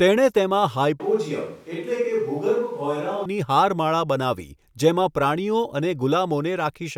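The close microphone's feed likely dropped out just after "તેણે તેમાં", leaving a distant microphone to carry the speech from 1.00 to 3.25 s. The voice suddenly turns roomy and hollow, loses bass, falls roughly 5 dB, and room noise rises, then snaps back.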